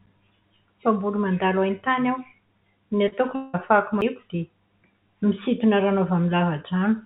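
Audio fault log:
3.08–3.14 s and 3.16–3.19 s, short concealed packet loss: two quick smeary wobbles where about 40 ms and then 20 ms went missing and got patched by stretching the preceding sound.
3.35–3.55 s, long network dropout: roughly 180 ms of sound is replaced by a continued, fading buzz rather than silence, then picks up later, likely a receiver concealing a lost stretch.
4.01 s, CD skip: a brief tick and a mute of a few milliseconds, after which the audio carries on from a different spot, as if the laser jumped to another turn of the spiral.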